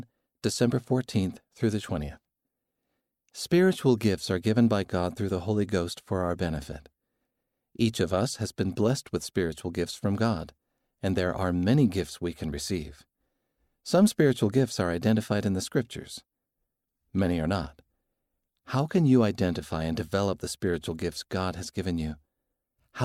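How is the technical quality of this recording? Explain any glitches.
No glitches or technical faults can be heard at any point in the recording.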